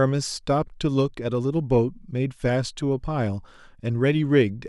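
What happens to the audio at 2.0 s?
Nothing goes wrong at 2.0 s; the speech carries on intact through that point with no dropout, click or distortion.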